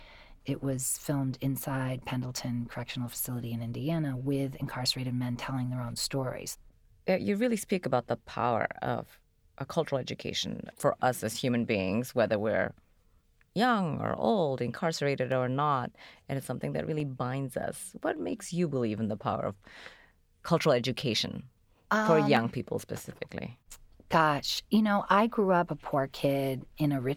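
Four sharp, isolated clicks cut through the speech at 3.2 s, 15.32 s (between "young or old incarcerated" and "or not and it's"), 17.0 s (between "and it's something that" and "binds us") and 22.37 s (between "cultural education for um" and "people specifically"). Each is likely a case of dropped samples, where well under a millisecond vanishes from the stream and the waveform jumps abruptly. Unlike a dropout, no audible stretch of sound goes missing, only a single click.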